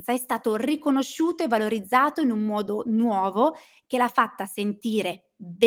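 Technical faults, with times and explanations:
No technical faults are heard in this speech, so there are no times or explanations to give.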